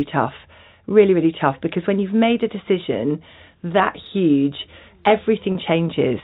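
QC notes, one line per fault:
5.52–5.55 s, packet loss with pitch repetition: a brief 30 ms gap, likely one dropped packet, where the receiver loops the last pitch period to cover it, so the speech goes slightly held and buzzy for a moment, over the narrow 4 kHz G.711 telephone band.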